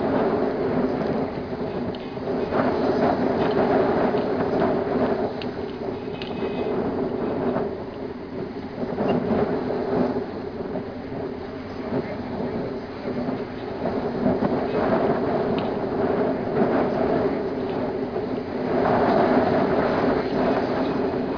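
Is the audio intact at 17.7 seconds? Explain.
Yes, at 17.7 seconds the audio is intact, with no fault audible at that moment.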